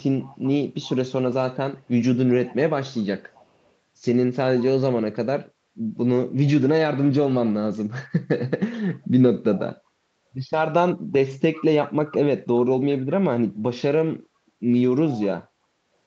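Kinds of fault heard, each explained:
Echo leak: A faint delayed copy of the speech trails the original by about 0.39 s, first from the very start to about 0.9 s, sitting roughly 25 dB below the main signal, then again from 3.3 to 3.7 s, even quieter at around 35 dB down. The likely cause is a far end on a loudspeaker whose echo canceller didn't fully remove what its mic picked up, so the leftover got sent back.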